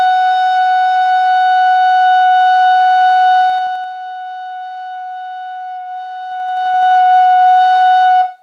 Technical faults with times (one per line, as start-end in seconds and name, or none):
3.41-3.93 zipper noise
6.23-6.91 zipper noise